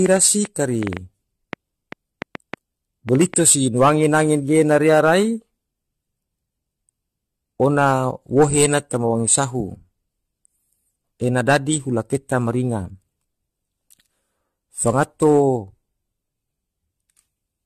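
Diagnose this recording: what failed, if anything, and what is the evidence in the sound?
The codec stage shows generation loss across the whole speech clip. Nothing sounds above 14.5 kHz. The speech is swirly, smeared and hollow, more so than one encode at this band limit would give. Consonant attacks blur. This is likely repeated lossy encoding, around seven passes, and it fits AAC-LC at about 64 kbit/s. Each pass requantises on a shifted frame grid. Noise and spectral holes stack up.

A train of clicks runs from 0.06 s to 3.35 s. There are roughly fifteen, at about 4.6 per second, spaced unevenly. They share one shape and peak about 10 dB above the speech. They tick through pauses as well as over the speech. That points most likely to interference in the analogue wiring or a faulty connection or power supply injecting pulses into the signal.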